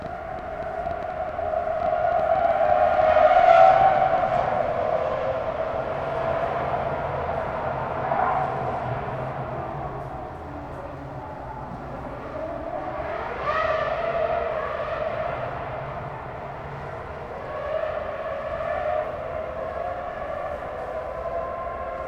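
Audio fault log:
0.02–4.19 s, train of clicks: A run of sharp ticks sits over the sound from the very start. They arrive at about 7 per second, but the spacing is uneven. There are roughly thirty of them, each with much the same short, hard shape. Their peaks reach about the level of the sound itself. The likely cause is interference from nearby equipment or a faulty connection or power supply, injecting brief pulses into the signal.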